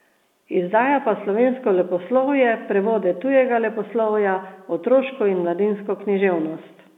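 Nothing stood out on listening to this speech, which comes across as an ordinary telephone-band recording.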